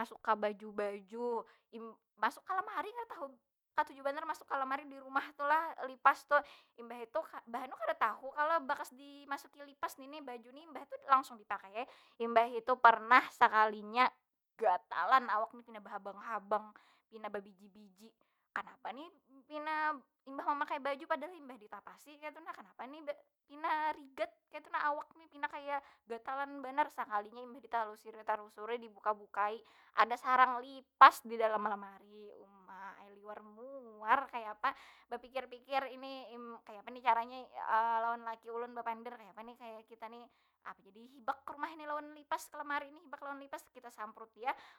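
Nothing technical goes wrong anywhere in this speech recording, so there's really nothing here to flag.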